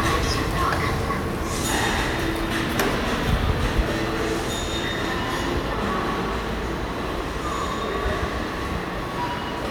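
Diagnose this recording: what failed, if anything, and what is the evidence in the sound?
Nothing failed in this recording, and the sound gives no evidence of a fault at any stage.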